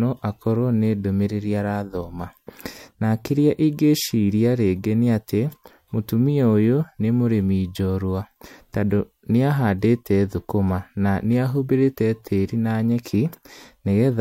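No technical fault can be heard anywhere in the recording; the speech signal stays continuous and stable throughout.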